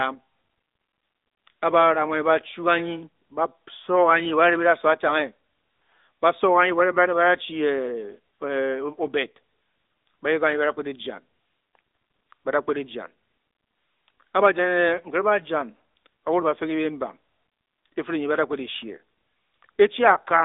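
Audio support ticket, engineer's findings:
AMR narrowband mobile codec, whole clip. Speech band-limited to roughly 250 Hz–3.7 kHz, nothing above 3.8 kHz. Plainly audible buzzy, synthetic coloration from pulse-excited vocal-tract modelling in 20 ms frames. Damage level fits a mid mode near 10.2 kbps.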